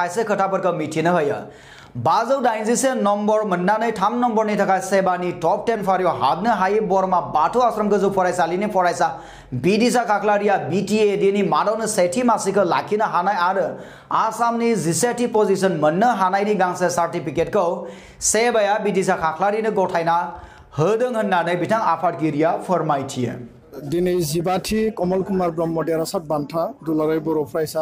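Drift correction steps at 5.75–6.32 s, 22.06–23.93 s and 26.24–27.52 s slow the audio by 6.1% and drop its pitch 109 cents before it snaps back, likely from a clock-matching playback rate jump.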